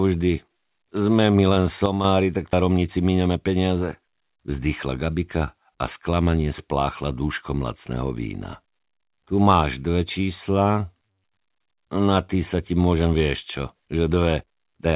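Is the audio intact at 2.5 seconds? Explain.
No. At 2.53 s there is a skip ahead: roughly a third of a second of speech is missing, and playback jumps straight to later audio with no gap or fill between the two sides. This happens when a stretch of audio waiting in the jitter buffer is discarded, for example on overflow, so the delay drops by about that amount at once. The join sounds like an abrupt cut, heard within the narrowband, 4 kHz-limited call audio.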